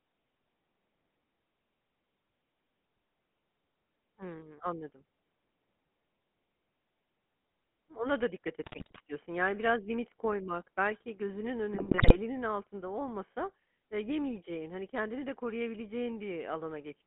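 Throughout, the speech has a buzzy, gravelly roughness and a narrow 150 Hz to 3.4 kHz band, the sound of the GSM full-rate codec, consistent with its 13 kbps rate and pulse-driven excitation. Just after "da dikkat", from 8.62 to 9.00 s, and from 11.74 to 12.17 s, between "limit koymak belki gözünün" and "altında olmasa eee yemeyeceğin", the speech breaks into squawks and gargling: GSM bit errors at roughly 4% corrupting the decoder's filter, pitch and gain values.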